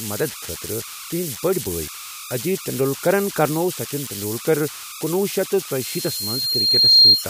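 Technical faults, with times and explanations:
Throughout: converter idle tones. A whistle around 1.5 kHz sits in the pauses, about 12 dB below the speech, with grainy noise under the speech. An undithered delta-sigma converter is settling into repeating bit patterns when its input is small.
5.81 to 7.27 s: loudspeaker feedback squeal. A single 4.2 kHz tone swells over about a second until it stands roughly 15 dB above the speech. The microphone is picking up its own loudspeaker, and at that frequency the loop gain exceeds one.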